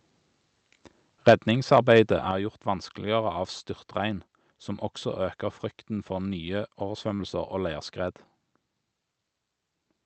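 Speech carried over an Opus call path, whose top end stops around 8 kHz, with three kinds of fault. Microphone overload shows up as a harsh, crackling edge on the loudest peaks at 1.28 to 1.33 s, about 6 dB over the converter's limit with roughly 15 percent of samples flattened, and again at 1.74 to 1.78 s, about 3 dB over with only a small fraction clipped. The likely cause is a microphone input volume set too high. Unlike codec coding noise, this grit comes only on the peaks and sounds like squared-off crackle rather than a smeared, watery texture. The microphone volume is stepped down at 1.30 s by about 4 dB and again at 2.31 s by about 6 dB. Each change is a sudden drop in the whole level, and it likely comes from the call software lowering the input after detecting the overload. A speaker simply getting quieter would let the level fall gradually, with the room noise unchanged. Here the background drops at the same instant as the speech, in one step. 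Short concealed packet loss occurs at 7.15 to 7.21 s. About 40 ms of audio never arrived, and the receiver filled 39 ms of it by extending the preceding sound before blending back in. The result is a brief smear or wobble rather than the clean gap of silence a plain dropout would leave.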